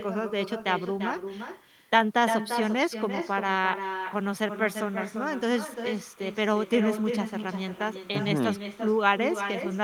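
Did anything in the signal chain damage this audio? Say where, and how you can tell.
Yes. In call processing there is echo with no canceller: through the whole clip, every phrase of speech returns about a third of a second later, roughly 7 dB quieter and thinner. The far end's loudspeaker is feeding its microphone, and nothing subtracts that path.

In the analogue wiring there is timecode bleed: from 4.13 s to the end, a faint chirping warble sits roughly 30 dB under the speech, alternating near 1 and 2 kHz. Linear timecode from an adjacent cable or track is leaking into the audio.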